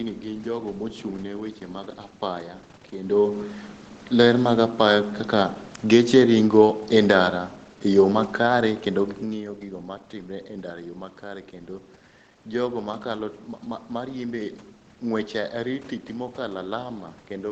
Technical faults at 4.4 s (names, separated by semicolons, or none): none